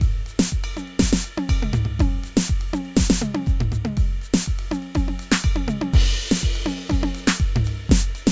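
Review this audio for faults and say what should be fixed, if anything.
Nothing here needs fixing; the music comes through without any technical problems to flag.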